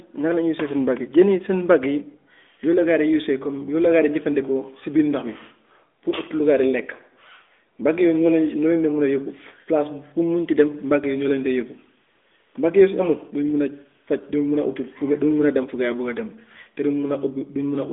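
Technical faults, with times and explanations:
Nothing stood out on listening to the clip.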